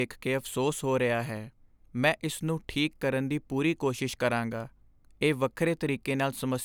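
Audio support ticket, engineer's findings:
Regular clicks in the speech, 1.37 s to 6.36 s, starting right after "ਕੇ ਅਫ਼ਸੋਸ ਹੋ ਰਿਹਾ". About four, every 1.66 s. Likely clock drift buffer slips: two free-running clocks roughly 200 ppm apart, buffer drops or repeats around 15 samples each time.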